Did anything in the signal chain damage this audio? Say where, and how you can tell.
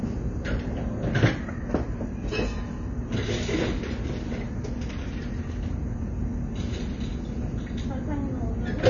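Yes. Across the whole clip the sound is dull and smeared, with nothing above about 6.9 kHz and a plainly audible warbling, fizzy texture on sustained content. This points to the codec stage, likely AAC compression at a low rate, consistent with AAC-LC near 24 kbps. Short of bits, the encoder drops its cut-off well below full bandwidth and quantises the remaining frequency lines so coarsely that detail smears into that swirling texture.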